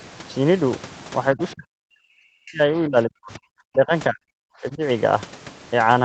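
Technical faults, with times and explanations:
1.32 to 3.92 s, 4.09 to 4.44 s and 4.61 to 4.82 s, speech suppressed in double talk: the speech repeatedly dips and breaks into pieces. The longest stretch loses around two seconds of level, at worst by about 40 dB. The second run is similarly deep, and the last, brief one drops only about 10 dB. This is likely an echo canceller that, with both ends talking at once, mistook the near-end speech for loudspeaker echo and attenuated it.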